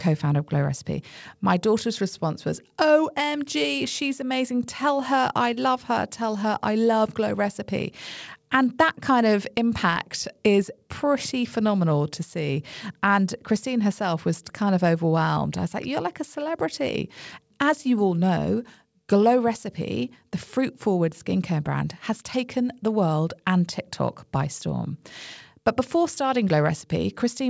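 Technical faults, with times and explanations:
The speech comes through a working call path with no faults, its band ending at 8 kHz in the way a wideband call codec such as G.722 would leave it.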